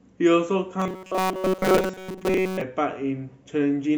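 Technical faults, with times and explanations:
0.8–2.62 s: robotic sound from repeated short buffers. The speech turns into a rigid metallic buzz near 188 Hz that loosely tracks the words. The likely cause is late audio being covered by replaying a segment of about 5.3 ms, repeated for most of this stretch.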